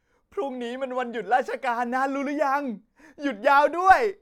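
Nothing here sounds out of place; the speech runs along with no dropouts, clicks, glitches or other trouble to point at.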